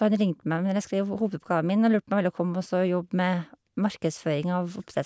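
Nothing in the recording stands out as a technical fault, so there's no problem to point to anywhere along the way.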